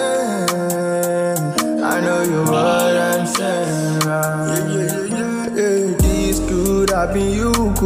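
No technical faults can be heard anywhere in the recording. There is nothing in the audio that needs a timestamp or further comment.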